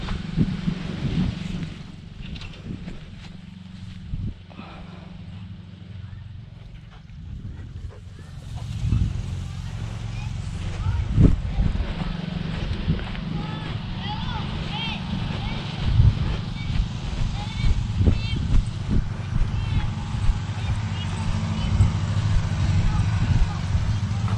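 From 1.4 to 2.04 s the level drops by roughly 10 dB with zipper noise, and from 7.98 to 8.84 s it rises by about the same amount with the same fault. Each move is made in coarse steps, around fifty a second, with no smoothing between them, so every jump leaves a tiny click. A clean fade glides without ticking, but here a rapid zipping rides on the sound for exactly as long as the level moves.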